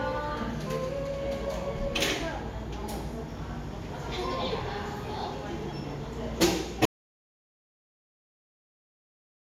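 At 6.85 s the sound cuts out into an audio dropout to silence lasting to the end, likely a lost input; the waveform flatlines and the spectrogram goes blank.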